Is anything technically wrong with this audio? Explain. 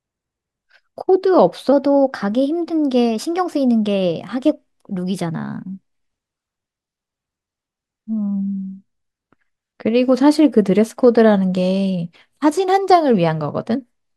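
Yes. Wrong sample rate from 1.72 to 6.43 s: the samples play back faster than they were captured, with no conversion, which fits 44.1 kHz audio played at 48 kHz. The speech runs 1.09 times fast and rises 1.47 semitones, sounding slightly higher and faster.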